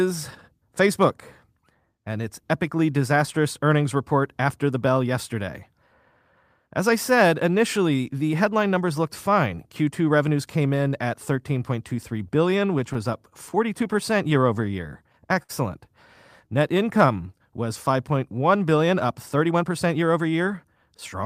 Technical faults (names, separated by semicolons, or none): scattered short gaps; jitter buffer slow-down; short stall from a late packet; jitter buffer speed-up